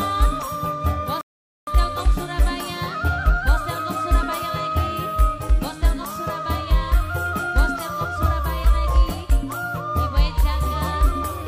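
At 1.21 s the sound drops abruptly to silence, then picks up at 1.67 s exactly where it left off, with nothing skipped. This is a rebuffering stall: the player exhausted its downloaded audio and waited for more, inserting about 0.46 s of dead air.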